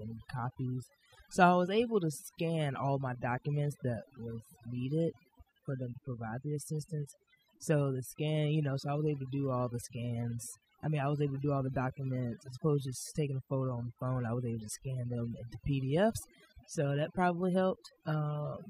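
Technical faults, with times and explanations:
Throughout: overdone noise removal. The noise reduction was pushed too hard, so any frequency band sitting close to its noise estimate gets pulled right down or shut off. The background drops away and breaks up into little twinkling, warbling specks, and the quieter parts of the speech get stripped away too.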